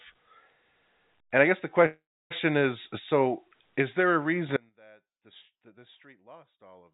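Right after "I guess the", at 1.86 s, there's a call audio freeze that runs to 2.32 s. The last bit of sound gets stretched into a short fading buzz or hiss, then goes dead quiet for about 0.31 s, before picking up with "is so is there". That pattern points to packets likely held up in transit, so the jitter buffer ran dry and the receiver just held the last sound. Nothing actually gets lost. The audio resumes where it left off, with about 0.44 s of extra delay added.

Then at 4.57 s, just after "so is there a", it's an audio dropout to a faint residue that lasts to the end of the clip. The signal cuts out abruptly, not like a pause or a fade, and all that's left is a faint leak of sound about 30 dB below normal level. That likely means the signal was lost while the path after the break stayed live. The band-limited call sound, with nothing above 4 kHz, fits a G.711 A-law codec.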